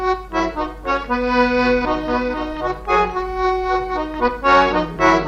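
No technical faults are audible.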